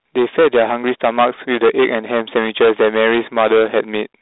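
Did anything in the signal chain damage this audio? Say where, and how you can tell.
Yes. Hard clipping at the input gain or converter stage runs throughout. Driven about 14 dB too hot, roughly a tenth of samples flatten into harsh fuzz, even through the telephone band.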